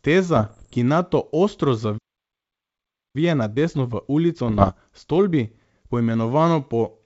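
A G.722 wideband speech recording, clear up to about 7 kHz in a way that fits the full 64 kbit/s mode, suffers three kinds of technical fault. Bit errors on the ADPCM link, under one percent at 0.36 to 0.75 s and around one percent at 4.48 to 4.71 s, corrupt the decoder's step size and predictor, so each flipped bit rings on briefly as rough pops and short jumps in level. A playback stall, likely the player running out of buffered data or its thread being blocked, cuts the speech off from 1.98 to 3.16 s, leaving about 1.16 s of silence before the audio resumes. Time-compressed catch-up then trims the backlog by splicing out small pieces with cross-fades, so from 3.16 to 6.16 s the speech runs about 1.1 times fast at unchanged pitch.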